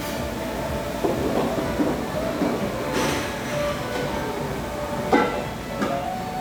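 No technical faults can be heard anywhere in this recording.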